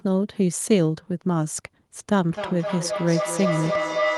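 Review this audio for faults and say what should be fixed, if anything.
A feedback howl runs from 2.33 s to the end. Sound loops from loudspeaker to microphone, gaining each pass. It settles near 700 Hz, repeats about every 0.3 s, and peaks about 2 dB below the speech. Prevent it by joining with one device per room.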